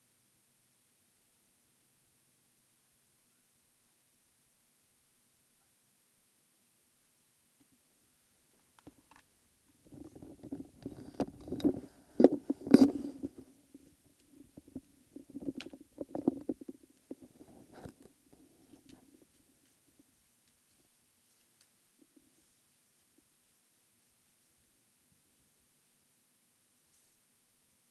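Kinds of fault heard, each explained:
Nothing's wrong with these sounds; they come across as a normal call would, with the top end rolling off around 12 kHz as you'd expect from an Opus link.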